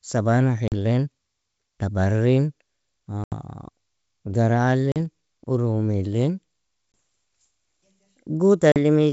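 Packet loss on an ADPCM call cuts hard-edged silent holes into the speech at 0.68–0.74 s, 3.24–3.34 s (the longest, about 80 ms), 4.92–4.97 s, 6.92–6.94 s and 8.72–8.77 s. Each gap suggests one to four dropped packets. The G.722 decoder's predictor and step size lose track, so speech resumes slightly distorted before settling. A waveform shows flat gaps with sharp edges; a spectrogram shows blank vertical slots.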